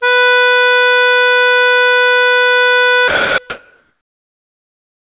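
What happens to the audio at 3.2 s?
At 3.2 s the music briefly vanishes under steady comfort noise from 3.08 to 3.38 s. That's sound dropped by the voice detector, which likely mistook the music for background and stopped sending.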